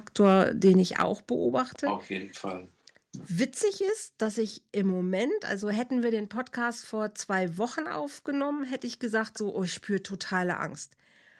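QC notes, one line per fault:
0.26–0.35 s, 0.65–0.70 s, 1.00–1.02 s, microphone overload: the input gain was likely set too high, so speech peaks drove the converter past full scale by about 1, 2 and 4 dB. A small share of samples have their tops flattened, giving those syllables a harsh, crackly edge.
1.02 s, microphone volume stepped down: right after the strongest overloaded peak, the call software likely cut the microphone's input gain in one step of about 6 dB. Speech and background drop together, abruptly, rather than fading down smoothly.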